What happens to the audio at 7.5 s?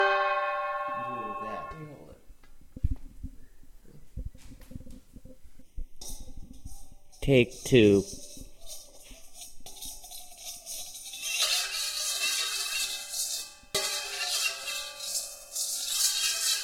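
At 7.5 s the sound turns hollow and phasey, with a scooped tone. This is channel delay (comb filtering), running from 5.62 to 11.42 s. One channel lags the other by roughly a third of a millisecond, and summing them to mono cancels evenly spaced frequencies, starting around 1.5 kHz.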